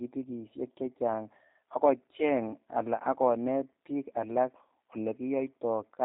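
From start to finish the speech sounds slightly rough and synthetic, with plainly audible damage and nothing above 3.8 kHz. This is G.729 codec coloration, consistent with an 8 kbit/s VoIP link rebuilding each frame from a vocal tract filter, pitch predictor and sparse pulses.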